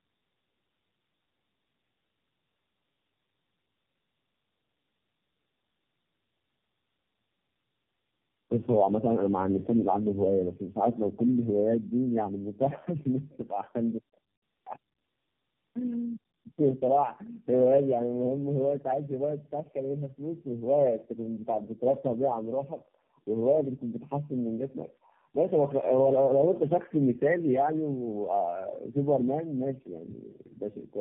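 From start to finish the speech shows tandem speech coding: it seems to have been decoded and re-encoded at several network borders, which fits about three low-rate AMR-NB stages of roughly 6 to 7 kbit/s. Nothing reaches above 3.7 kHz. Compared with a single narrowband codec, the speech sounds rougher, more muffled and more warbly.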